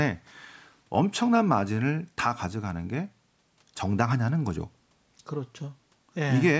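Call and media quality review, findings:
No faults found; call microphone processing behaves as expected.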